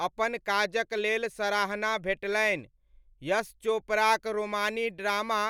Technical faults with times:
none

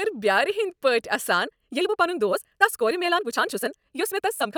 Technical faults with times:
1.42-4.57 time-stretched section

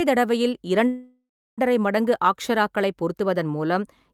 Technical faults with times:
0.87-1.60 call audio freeze

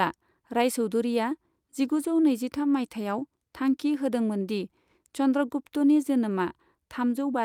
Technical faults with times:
none

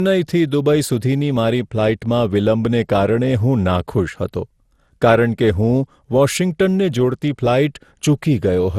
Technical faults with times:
0.00-8.79 generation loss

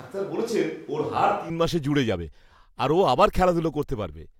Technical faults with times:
0.00-1.50 switch to a distant microphone

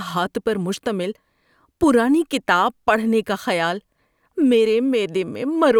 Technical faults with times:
none

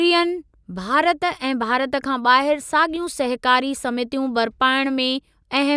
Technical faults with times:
none

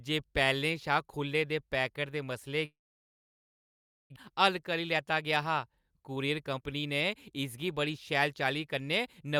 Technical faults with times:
2.65-4.18 long network dropout
4.32-9.37 jitter buffer speed-up

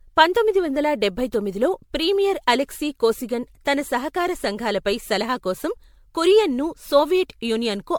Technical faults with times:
0.00-7.98 generation loss

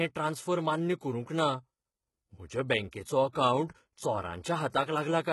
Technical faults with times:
0.00-5.33 HE-AAC compression
2.91 pre-echo
3.32-3.35 pre-echo

